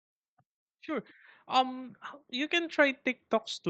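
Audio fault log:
0.85–3.06 s, automatic gain rising: speech and background noise swell together by about 6 dB, as the gain control slowly lifts input it judged too quiet.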